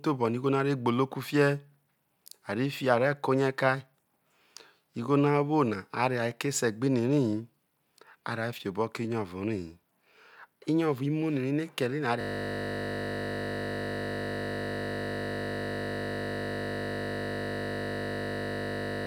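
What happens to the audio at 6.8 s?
Nothing goes wrong at 6.8 s; the speech there carries on cleanly, with no dropout, click, glitch or other fault in the signal.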